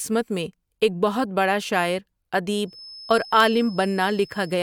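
From 2.63 s to the end, a thin, single-pitch 5.2 kHz whistle sits well below the speech: feedback whistle, likely from a loudspeaker-microphone loop hovering at the feedback point.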